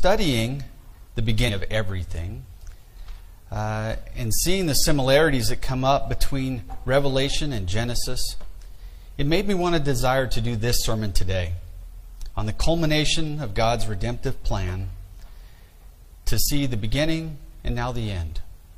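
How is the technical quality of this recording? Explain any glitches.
The recording has one glitch, caused by damaged data in a compressed stream, from 1.44 to 1.50 s. For about 60 milliseconds, part of the encoded data reaching the decoder was corrupt. The decoder could not read those frames correctly, lost its place in the stream and had to search for the next valid frame header before decoding normally again. What you hear is a brief chirp, squawk, click or short hole that breaks into the sound for that instant.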